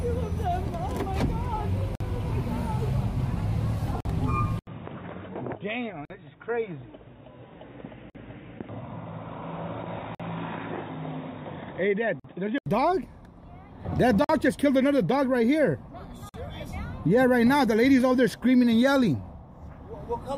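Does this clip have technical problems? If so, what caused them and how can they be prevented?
Yes. The audio was encoded in separate pieces roughly every 2 s and joined without trimming, so each piece's encoder start-up delay and final-frame padding remain as a gap at a join of encoded pieces. Short silences of about 48 ms (52 ms for the first) cut into continuous sound at 1.95, 4.00, 6.05, 8.10, 10.15, 12.20, 14.24 and 16.29 s, each with smeared edges before the sound resumes where it left off. Trimming encoder delay and padding at each join, or encoding the stream in one pass, prevents this.

From 4.59 to 12.66 s the sound changes character, most likely because the input switched to a poorer device. An 80 ms silence marks the switch, after which nothing above 3.8 kHz comes through, leaving a dull, boxy tone. The level drops by about 5 dB and a new background noise sits roughly 40 dB below the signal, until the original clarity returns at 12.66 s. 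Locking the recording to a fixed input device and disabling automatic device switching prevents this.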